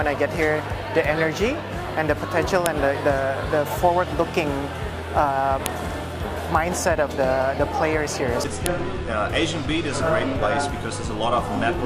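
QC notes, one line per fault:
2.66 s, 5.66 s and 8.66 s: file header played as audio. A sharp, loud snap lands at each time, exactly 3 s apart, regardless of the surrounding sound. Separate pieces were joined without stripping their headers, so those bytes play as samples.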